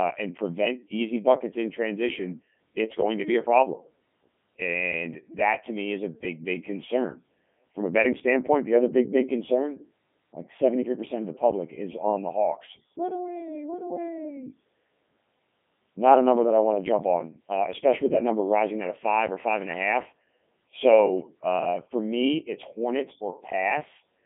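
Codec 2 vocoder damage runs throughout this speech: the decoder rebuilds the voice from sine waves, so it sounds robotic and buzzy, with heavy artefacts, a 150 Hz to 3.5 kHz band, nothing above 3.8 kHz, and a quality that fits the 3.2 kbit/s mode.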